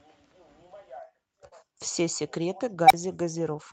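A speech recording with two faults. Short concealed packet loss: about 40 ms of audio arrived too late at 1.47 s, and the receiver bridged it by extending the preceding sound, leaving a brief smear until 1.54 s. An unstable filter: at 2.86 s a recursive filter's output ran away, so a tone near 700 Hz swells over about 42 ms, clips, then drops into 32 ms of silence ending around 2.93 s.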